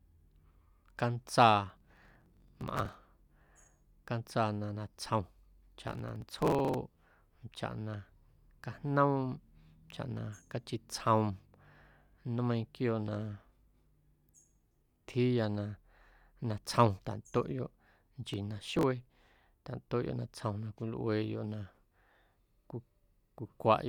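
Processor overload crackle occurs at 1.70–2.94 s, 5.88–6.74 s and 18.29–18.83 s. Very short buffers, on the order of a millisecond and a half, are repeatedly dropped rather than held, leaving hard-edged gaps that form a gritty tearing over the speech.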